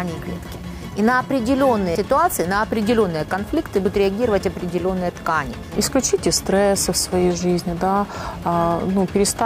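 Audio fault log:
1.95 s, 3.85 s and 7.65 s: audio missing between chunks. The sound skips forward abruptly, with about a tenth of a second gone each time. This likely comes from 2.0-second processing chunks losing a piece at each handover. The two sides then butt together without silence.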